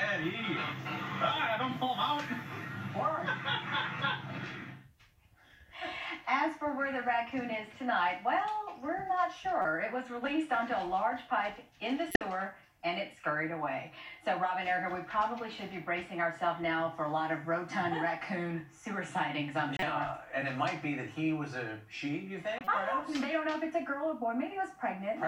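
Corrupt frame decoded at 9.62–9.65 s, 12.11–12.21 s, 19.73–19.83 s and 22.58–22.67 s: damaged compressed frames were decoded anyway, so misread gains and codes throw energy into wrong frequencies. Each is a short chirpy burst spanning a few frames, loudest near 12.1 s (about -10 dBFS) and faintest near 22.6 s (about -30 dBFS).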